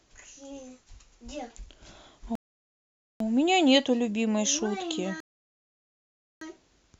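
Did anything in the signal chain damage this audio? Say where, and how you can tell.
Yes, at the playback stage. The speech drops to silence from 2.35 to 3.20 s and again from 5.20 to 6.41 s, then resumes exactly where it stopped. That is a rebuffering stall. The player ran dry and waited, adding about 0.85 s and 1.21 s.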